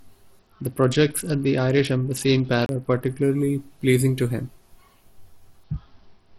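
A speech recording with two episodes of a Bluetooth SBC bit pool drop, from 0.39 to 3.23 s and again from 5.64 s to the end. In both, the treble goes dull and a gritty, grainy noise rides under the voice. That fits the sender cutting the bit pool from 31 to about 8, roughly 66 kbps. On a spectrogram the upper bands empty out above a hard ceiling, and the remaining energy looks blotchy and noisy. Inside the first episode a CD skip occurs from 2.66 to 2.69 s, heard as a tick, a very brief mute and a sudden jump to a different point in the speech. It comes from the laser jumping to another turn of the disc's spiral. A waveform shows a short flat gap with a discontinuity where the audio resumes, and a spectrogram shows a thin vertical click line at the break.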